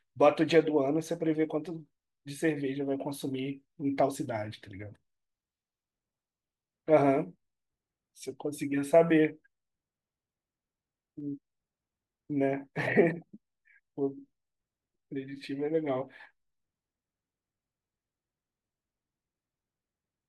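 Sharp single clicks cut through the speech at 4.54, 8.62 and 11.20 s. Each is likely dropped samples. A tiny fraction of a millisecond goes missing, so the waveform jumps abruptly. No sound is lost, just a brief tick with a thin vertical spectral line.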